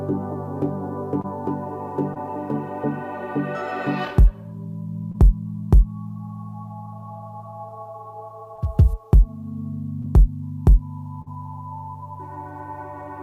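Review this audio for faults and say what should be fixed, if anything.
Short concealed packet loss occurs at 1.21–1.26, 2.14–2.18, 5.12–5.16, 8.56–8.60, 10.02–10.06 and 11.22–11.28 s. In each case about 20 ms of audio, and 40 ms at 11.22 s, never reached the decoder in time. The receiver extended the preceding sound across the gap and blended back, leaving brief smears. A deeper jitter buffer or forward error correction on the link would prevent these gaps.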